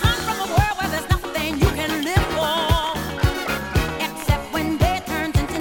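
No technical faults can be heard anywhere in this audio.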